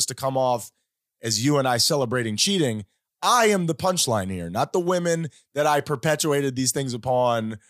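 Nothing goes wrong anywhere in this speech recording, so there's no technical fault to point to at any moment.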